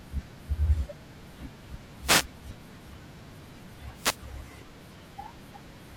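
The analogue FM radio link fades as reflections cancel, letting receiver noise surge into a wireless microphone noise hit: brief static swishes from 2.01 to 2.27 s and 3.93 to 4.21 s.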